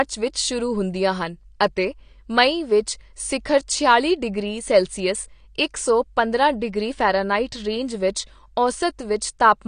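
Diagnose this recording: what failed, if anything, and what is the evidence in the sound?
Codec stage: the speech sounds dull and smeared throughout, with nothing above 9.7 kHz. That's likely AAC compression squeezed to a low bitrate, one that fits 32 kbps.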